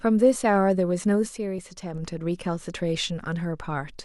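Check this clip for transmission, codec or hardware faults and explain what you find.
Two faults are present in this speech clip.

From 1.29 s to 1.94 s there is a sudden gain jump. The level drops by about 6 dB at once, with no ramp. Voice and background noise fall together. A gain setting applied mid-stream is the likely cause.

At 1.58 s, compressed frames are skipped. Roughly 70 ms of audio goes missing, which fits a couple of 32 ms frames. The decoder jumps ahead over them.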